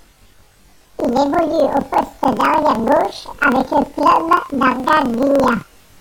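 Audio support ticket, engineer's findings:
Speech an octave high throughout, with a steady flutter at about 23.4 Hz. Probable fault in the decoder-to-output handoff: planar audio read as interleaved. Each 42.67 ms block, which fits a 2048-sample block, plays its left half then its right half at double speed, keeping overall pace but raising pitch 12 semitones.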